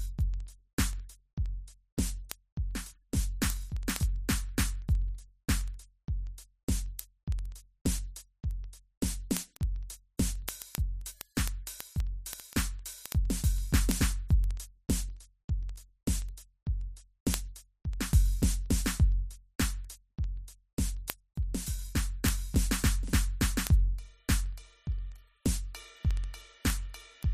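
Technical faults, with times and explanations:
0.14–27.29 s, word clock ticks: steady, uneven sharp ticks roughly every 70 ms, as an unlocked receiver clock drifting around 300 ppm slips one sample each time.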